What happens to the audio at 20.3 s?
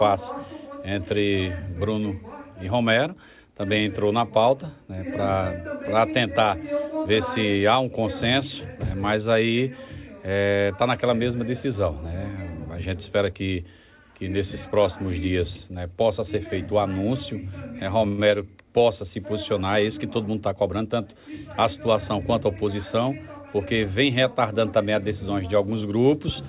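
At 20.3 s you're inside a jitter buffer speed-up that runs from about 20.18 to 21.16 s. The receiver had more audio queued than it wanted, so it kept snipping out short pitch-period-sized chunks to catch up. In total it dropped about a tenth of a second. Playback runs at roughly 109% speed while the pitch stays put, so that stretch sounds a little rushed.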